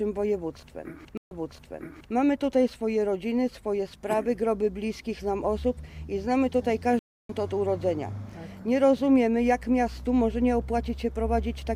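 At 1.17 s the first stream reconnect occurs: the connection drops, a fresh decoder starts mid-stream, and after a 137 ms gap the audio resumes about 0.82 s earlier, so that stretch repeats. At 6.99 s a second reconnect leaves a 302 ms gap, then playback jumps ahead by roughly a third of a second, skipping material. On a waveform each shows as a flat dead band; on a spectrogram, a blank vertical strip.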